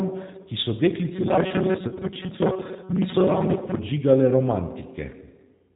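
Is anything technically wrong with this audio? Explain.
Yes. Throughout the speech there is a band-limited, slightly rough and synthetic quality, with nothing above 4 kHz. This is the G.729 codec, here the G.729A variant, plainly audible. It rebuilds speech from a vocal tract filter, a pitch predictor and a few pulses in every 10 ms frame, rather than preserving the waveform. Fine detail becomes a coarse, synthetic approximation, consistent with an 8 kbit/s stream.

From 1.88 to 2.00 s the speech breaks up. For short stretches it is replaced by a stretched, buzzy tone or coloured noise that fades in strength, and it stays weak or distorted as normal sound resumes. This is VoIP packet loss concealed by the speech codec. About 60 ms of audio went missing, scattered across 80 ms, with the longest gap 30 ms, which points to roughly six lost frames. The decoder filled each gap by repeating its last pitch and filter at falling gain. 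Because every frame depends on the previous one, recovery lags behind the returning packets.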